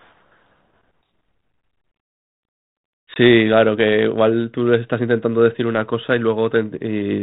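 At 3.14 s the speech breaks off for about 20 ms, roughly one packet's worth, in a packet loss on an ADPCM call carried over the G.726 link at 32 kbit/s. The hole is filled with hard-edged silence. What marks it out from a plain dropout in PCM audio is what follows at 3.17 s. The decoder's adaptive predictor and step size have drifted from the sender's, so the speech resumes with a brief, slightly distorted stretch before it locks back on.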